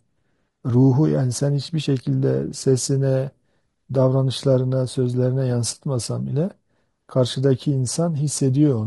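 Throughout the speech, the voice sounds rough and grainy, with noise between harmonics: likely low-delay AAC compression (AAC-ELD), coded too coarsely at a rate fitting about 32 kbps.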